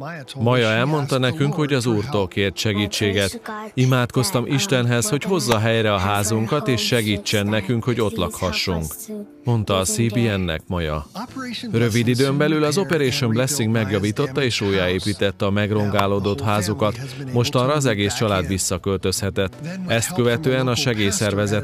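Electrical switching spikes land at 5.52 s, 12.93 s and 16.0 s, each a sharp snap sitting on top of the sound and peaking a few decibels below full scale. The likely cause is a nearby switch, motor or static discharge arcing briefly, with the audio line picking up that burst.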